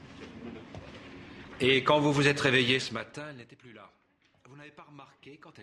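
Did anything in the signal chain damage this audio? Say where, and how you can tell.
Yes. From 2.67 to 3.54 s a fine ticking, zipping texture rides on the sound as its level falls by roughly 25 dB. That is zipper noise. The gain is being stepped in 1 dB increments about 50 times a second with no interpolation, and each jump leaves a small click. The step rate points to gain updated once per buffer in the driver or buffer stage.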